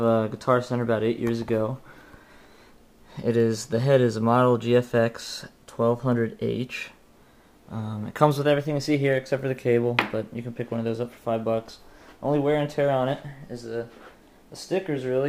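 No technical faults are audible anywhere in the recording.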